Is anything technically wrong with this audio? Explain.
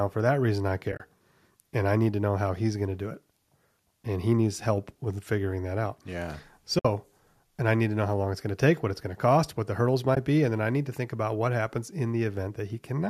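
Yes. AAC frame loss with muting occurs at 0.92–1.00 s (about 50 ms lost in short runs across 80 ms, the longest around 30 ms), 6.79–6.85 s (60 ms) and 10.15–10.17 s (20 ms). Lost frames are decoded as silence, and the overlapping windows fade the sound out and back in. Unlike a hard dropout, these holes have soft edges. The gap lengths suggest roughly 10 ms frames, likely from low-delay AAC coding of the speech.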